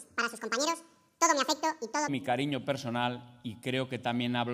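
A section at the wrong speed runs from 0.0 to 2.08 s, playing about 1.89 times too fast, so the sound is hurried and sits roughly ten semitones high. This likely comes from the section being played against the wrong clock, shifting speed and pitch together.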